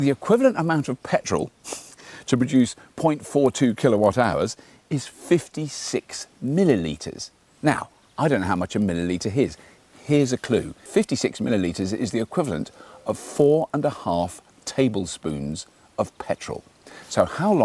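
Throughout the clip, a resampler restarted on every block leaves a faint 50 Hz buzz. Each 20 ms block was converted in isolation, so every block edge carries a small error. Unlike mains hum, the buzz disappears whenever the sound itself stops.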